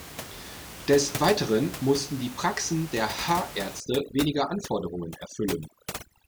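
From 3.80 s to the end at 6.28 s, the background drops and breaks up into twinkling specks: overdone noise removal, suppressing bands near the room noise estimate.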